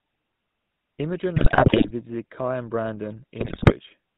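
From start to finish the speech carries the GSM full-rate codec's signature: a buzzy, gravelly roughness and nothing above 4 kHz, which fits a 13 kbit/s GSM full-rate stream. The decoder rebuilds the voice from a vocal-tract filter driven by a coarse, regularly spaced pulse excitation, and that thinned-out excitation produces the grain. Unlike plain band-limiting, which only dulls the sound, this adds a rasp that sits on every voiced sound and is plainly audible here.

From 1.36 to 1.91 s, and again from 3.40 to 3.73 s, the audio breaks into squawks, pops and gargling: GSM bit errors. Corrupted bits from a weak radio link reached the decoder, so the filter, pitch and gain values it used were wrong. Frames came out with warped spectra or sudden level jumps. Packet loss concealment would leave smoothed gaps or repeated fragments; these bursts are garbled, erratic noise instead. The second burst is shorter but comes from a denser error rate on the link.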